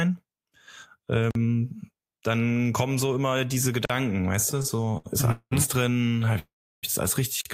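At 1.31 s, 3.85 s (after "kommen so immer diese") and 7.41 s (after "das alles richtig"), a gap between chunks cuts 44 ms holes into the speech every 2.5 s. From 4.51 to 5.53 s, repeated stalls (stutter) break the speech with 15 concealed gaps, the longest 200 ms. From 5.93 to 6.37 s there are 13 more, all short, so the speech drags and stutters. From 6.39 to 6.85 s, just before "das alles richtig", a call audio freeze stretches the last sound into a fading fill with about 340 ms of silence. It was likely caused by delayed packets emptying the jitter buffer.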